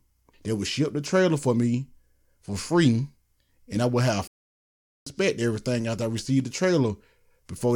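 It's a short speech clip with one clear problem: a playback stall. At 4.27 s the audio just cuts out mid-flow and the output sits in dead silence until 5.07 s, a gap of about 0.79 s, before sound picks up again. That kind of hole is most likely the player running dry of buffered data, or its audio thread getting blocked for a moment, so nothing reached the output until it caught up.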